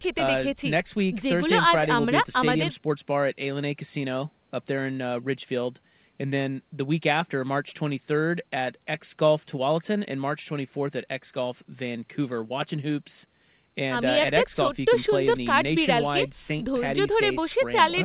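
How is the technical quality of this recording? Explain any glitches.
No faults or glitches are audible.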